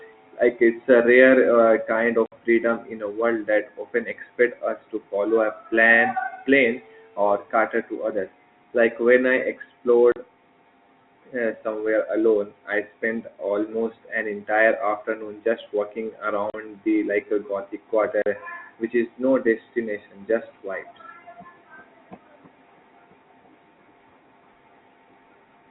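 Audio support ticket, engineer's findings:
Packet loss filled with silence: dropouts at 2.26 s (60 ms, just before "freedom in a world"), 10.12, 16.5 and 18.22 s (40 ms each). Lost packets were replaced with silence; the hole lengths fit 20 ms packets. On the waveform the signal drops to a flat line with hard edges, and on the spectrogram these show as blank vertical gaps. Band stops at 4 kHz, consistent with the G.711 telephone coding path.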